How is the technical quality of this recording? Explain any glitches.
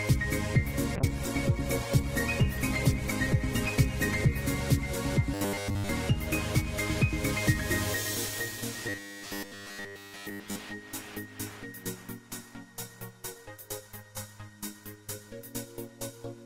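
The recording has two clear kinds of glitch: a stretch of degraded coding near the start, and two later bursts of mechanical buzzing.

From 0.97 to 4.45 s there is a call bitrate drop. The encoder's rate falls from 96 kbps to 14 kbps and stays at its lowest for about 3.4 s, so the sound is coded coarsely and loses its top end, turning muffled and watery. Unlike the buzzing later, there is no imposed pitch. The texture smears but the timing flows continuously.

From 5.34 to 5.89 s and again from 8.89 to 10.59 s the sound takes on a rigid 100 Hz buzz. This is robotic sound from repeated short buffers. Fresh audio arrives too rarely, so the player loops its last fragment, which fits a 10 ms buffer, and essentially all of the real signal in those spans is skipped. The likely cause is a stalled audio stream. What sets it apart from the bitrate drop is the fixed metallic drone, rather than dullness.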